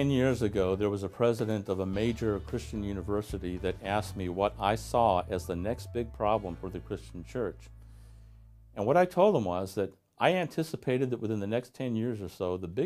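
Nothing stood out on listening to this recording.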